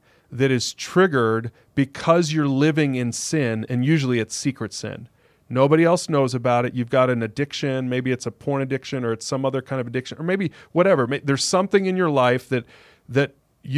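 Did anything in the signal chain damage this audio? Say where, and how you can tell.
No, nothing along the chain seems to have left a mark on this speech recording, so there's no stage to point a finger at.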